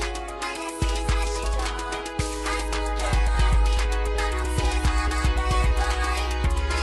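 At 1.43 s there is a skip ahead. Roughly half a second of audio never plays. The missing stretch was dropped while later audio was already queued, so playback leaps straight to it. Nothing fills the join and there is no silence. The two sides butt together almost directly. The sound lurches forward with an abrupt seam, and the continuity before and after the jump does not match.

From 3.27 s to 5.71 s comes a jitter buffer speed-up. The buffer was holding more audio than its target. To shed the extra delay, the receiver cut out tiny slices, each one or a few pitch periods long, again and again. Together they add up to a few tens of milliseconds. Playback runs at about 101% speed with the pitch unchanged. The effect is slight, well short of sounding hurried.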